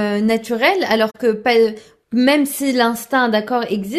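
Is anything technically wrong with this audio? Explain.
Yes, there's a corrupt frame concealed from 1.10 to 1.17 s: the decoder caught damaged AAC data and papered over it across about three frames.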